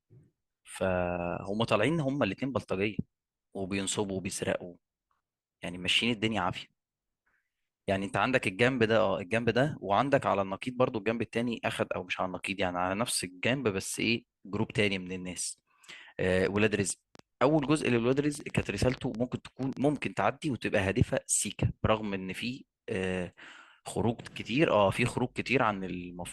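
From 16.46 to 19.97 s, a train of clicks ticks over the speech. About six per second, unevenly spaced, and a little louder than the speech. Likely interference or a faulty connection.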